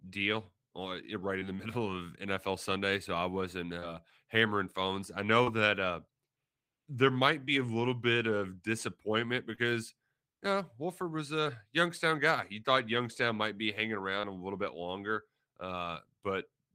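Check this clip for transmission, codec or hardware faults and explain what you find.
The speech carries one kind of fault, repeated seven times: short concealed packet loss, at 1.39, 3.80, 5.44, 7.45, 9.55, 11.43 and 14.21 s. Each time about 20 ms of audio failed to arrive, and the receiver patched the gap by extending the preceding sound, pitched if voiced and noise-like if not, for roughly 13 to 25 ms before crossfading back. Each patch is a brief smear or wobble, for instance between "so I wasn't" and "hammering phones I", just after "hammering phones I", and between "might be hanging" and "a little bit longer".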